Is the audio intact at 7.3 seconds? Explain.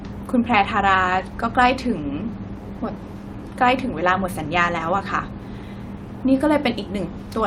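Yes, the audio is intact at 7.3 seconds, with no fault audible at that moment.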